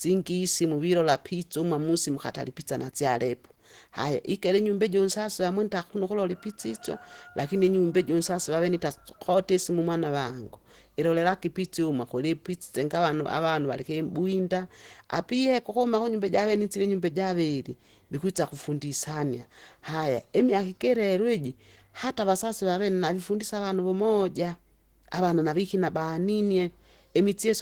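Speech throughout carries Opus compression damage: a hoarse, grainy roughness rather than MP3's swirling holes, likely from hybrid-mode encoding at a rate fitting around 16 kbps.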